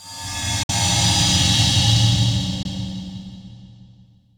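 At 0.63 to 0.70 s the sound cuts out for about 56 ms, and at 2.63 to 2.66 s a shorter gap of about 19 ms follows. Both gaps are likely Bluetooth dropouts, where late packets were discarded. The first gap fits about three lost packets, the second about one. When the sound returns, it resumes further along, as if it had kept playing. A waveform shows flat, near-zero stretches, and a spectrogram shows blank vertical bands across all frequencies.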